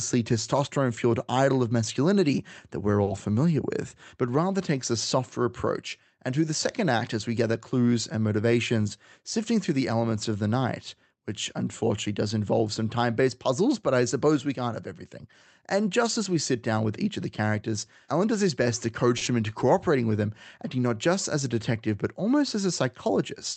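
From 3.03 to 3.09 s, right after "of masculinity that we're", the sound hangs on one spot for an instant with a faint buzz before carrying on. This is a short stall from a late packet: the jitter buffer ran dry, so the receiver stretched the last sound for about 40 ms until the packet arrived, and nothing was lost.

Between 15.86 and 16.73 s the speech sounds slightly rushed while its pitch stays the same. This is a jitter buffer speed-up. With too much audio queued, the receiver cut out tiny pitch-period slices, about 50 ms in all, so playback ran at 105% speed.

A second stall from a late packet falls at 19.17 to 19.23 s, after "does his best to". It has the same held, slightly buzzy 40 ms stretch. Right after it, from 19.25 to 19.29 s, just before "them into cooperating with", a brief smear marks short concealed packet loss. The receiver never got 20 ms of audio and filled the gap by extending the preceding sound, then blended back into the real signal.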